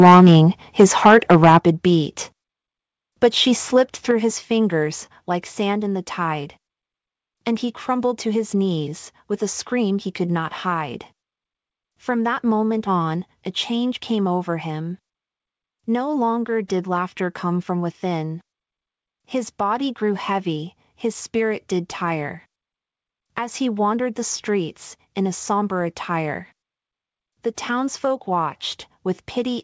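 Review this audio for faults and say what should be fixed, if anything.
The opening has a harsh, crackling edge on its loudest syllables from 0.0 to 0.39 s and again from 0.8 to 1.58 s. This is microphone overload, likely caused by input gain set about 5 dB too high, so the peaks flatten against the converter's ceiling. The clipping is heavy in the first stretch and lighter in the second. Unlike codec distortion, this grit follows loudness and disappears on quieter syllables. To prevent it, lower the microphone input gain so that peaks keep some headroom.

At 1.6 s, immediately after the second overloaded stretch, the speech and the background drop together by about 6 dB in a single step. It happens again at 4.11 s, by about 4 dB, between "she slipped" and "his fingers like sand". This is the microphone volume stepped down, likely by the call software's automatic level control reacting to the microphone being too loud or clipping. 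Unlike a fade or compression, the level falls instantly and stays down. To prevent it, turn off automatic microphone level adjustment and set the gain correctly before the call.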